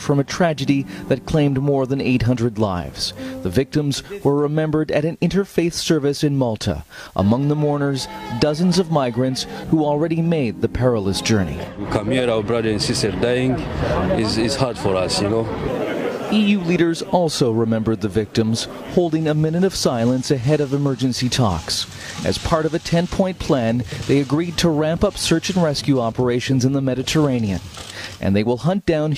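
No technical faults can be heard anywhere in the recording, which holds steady throughout without any audible disturbance to the signal.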